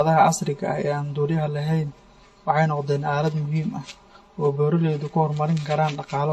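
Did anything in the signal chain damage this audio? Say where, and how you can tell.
Yes. The first fault is channel delay (comb filtering), at the mixing or driver stage. It runs through the whole clip. The speech sounds hollow and phasey from start to finish. One channel lags the other by around 5 ms before the two are summed to mono. Anything common to both channels then cancels at fixed, evenly spaced frequencies. The first notch sits near 100 Hz, and the rest follow about every 200 Hz above it.

The second fault is at the codec stage, and it is also present throughout. There is no content above 16.1 kHz. Different coding artefacts are audible together, layered on one another rather than coming from a single codec. The likely cause is transcoding between lossy codecs, a WMA encode followed by HE-AAC and then AAC-LC. Each pass spends bits on the previous one's damage and adds its own. 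The cut-off and texture fit 48 kbit/s at each step.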